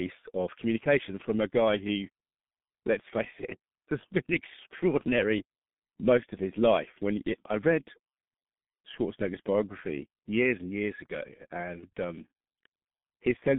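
From start to finish the speech carries G.723.1 codec damage, and it's heavy. The band runs only about 150 Hz to 3.6 kHz, so it's muffled, and the slow-updating low-rate model, which fits roughly 6.3 kbit/s, leaves it hoarse with smeared consonants.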